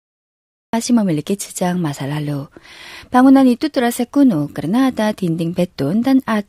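The recording or stream began late, so the first 0.73 s is pure digital silence and the speech jumps in at 0.73 s already mid-sound. This cut-off start leaves no natural attack or fade-in, and the opening sound is sliced off rather than rising from quiet.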